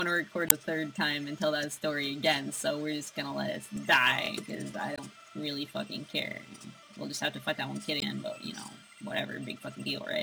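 A rough, gritty hiss rides on the audio throughout, thickening on loud and bright passages and disappearing in silence. This is sample clock jitter: the converter's timing wanders by around 5 microseconds, so samples land early or late, producing error roughly 20 dB below the signal. Between 0.46 and 0.52 s a brief glitch interrupts the sound, pointing to damaged data in a compressed stream: corrupted bytes there made the decoder misread frames and lose sync until it found the next valid frame header.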